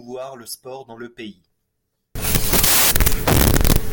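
From 2.15 s to the end of the speech, the audio turns into samples built from the wrong bytes. The reader assembles each sample misaligned or byte-swapped, so the rapidly changing low-order bits land in the most significant position. The result is loud, harsh broadband noise, close to white on the louder speech. On a spectrogram it shows as dense energy across the full band; the waveform jumps sharply in amplitude.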